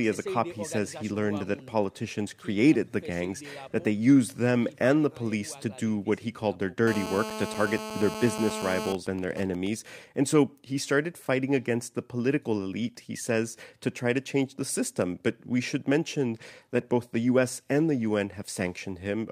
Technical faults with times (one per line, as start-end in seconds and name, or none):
6.87-8.89 GSM phone buzz
8.89-9.67 GSM signalling bursts